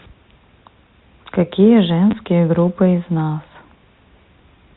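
At 2.11 s there is packet loss with the last packet repeated. A 20 ms gap is filled by replaying earlier audio, producing a brief stutter.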